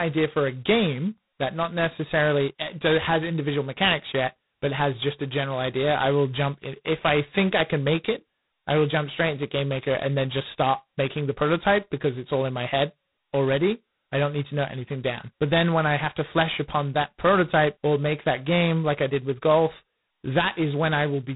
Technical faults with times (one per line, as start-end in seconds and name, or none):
0.00-21.35 G.726 ADPCM